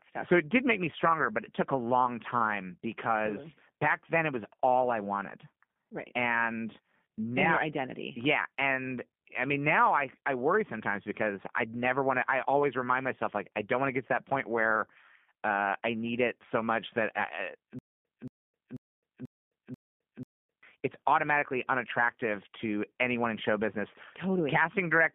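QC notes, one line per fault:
Throughout: G.729 codec. The sound is confined to a telephone band of about 150 Hz to 3.5 kHz at 8 kbit/s. Speech is rebuilt from a vocal tract model, a pitch predictor and a few pulses per frame. The codec damage is plainly audible as a rough, synthetic texture.
17.79 to 20.63 s: stutter with silent gaps. A 227 ms fragment repeats six times, each followed by 262 ms of digital silence, so a burst returns every 489 ms. The likely cause is a stalled stream replaying its last fragment at each retry. The audio for that span is lost.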